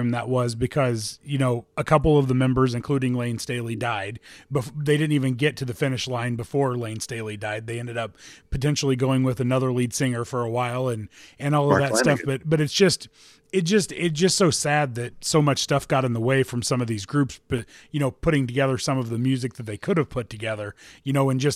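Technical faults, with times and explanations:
17.58 s, block of digital silence: between "some of these groups" and "you know putting together", the speech drops to silence for about 2.7 ms and then resumes. Neither edge has a fade, and a gap this short is heard as a tick or dip rather than as silence. The length fits a 128-sample buffer that went unfilled. A lone transient click would leave no gap at all, and a longer dropout would be heard as a hole rather than a tick.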